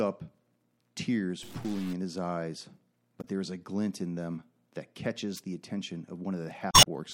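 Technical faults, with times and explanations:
1.43–1.93 s, stuck bit: for half a second just before "in his eyes" the sound turns distorted, with a gritty noise floor under it. This is likely one data bit held fixed, throwing about half the samples off by that bit's weight in a waveform-dependent pattern.
3.21–3.25 s, damaged data in a compressed stream: between "in his eyes" and "there is a glint" a brief glitch cuts in. Corrupted bytes in the encoded stream made the decoder misread frames and lose sync until it found the next valid frame header.
5.36–5.41 s, wireless microphone noise hit: right after "glint in them that" and before "the attention" a short swish of static sweeps over the sound. The analogue FM radio link faded as reflected signals cancelled, letting receiver noise rise over the audio for about 50 ms.
6.71–6.87 s, damaged data in a compressed stream: a glitchy stretch near the end, where the timing also stretches by about 24 ms. 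Here the decoder struggled through corrupted frames while resynchronising, producing mangled output and extra duration before clean decoding resumed.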